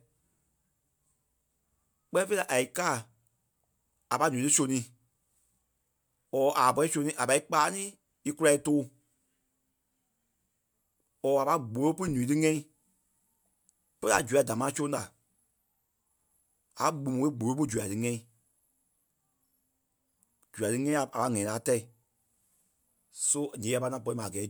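Speech recording with nothing technically wrong with it.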